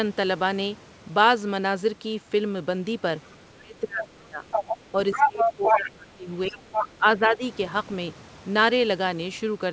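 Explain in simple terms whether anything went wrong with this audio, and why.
Yes, two things went wrong. A second, fainter voice slips in around 3.23 to 3.36 s, 4.51 to 4.77 s, 5.12 to 5.9 s and 6.72 to 6.88 s, briefly becoming as loud as the speaker or louder. This is the other side's voice leaking through, likely because the loudspeaker playing the far end reached the microphone and the echo canceller missed it.

Meanwhile, the speaker's own voice sinks, thins out or drops in pieces from 3.6 to 4.45 s, 4.92 to 6.79 s and 6.95 to 7.44 s. That is speech suppressed in double talk: with both people talking at once, the echo canceller likely couldn't tell them apart and turned everything down.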